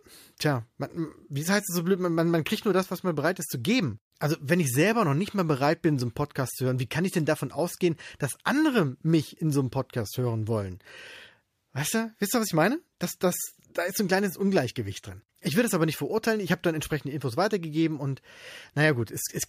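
No technical faults can be heard anywhere in the speech.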